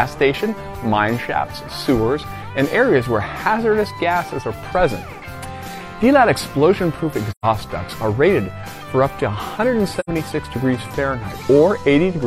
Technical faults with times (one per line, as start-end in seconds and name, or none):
7.31-7.45 AAC frame loss with muting
9.99-10.09 AAC frame loss with muting